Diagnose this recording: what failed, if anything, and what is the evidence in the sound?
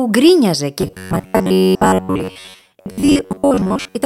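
A buffer underrun at the driver stage likely starved playback from 0.81 s to 4.06 s, so a block of about 11 ms kept replaying while most of the real audio was skipped. This robotic sound from repeated short buffers turns the speech into a rigid metallic buzz at 93.8 Hz.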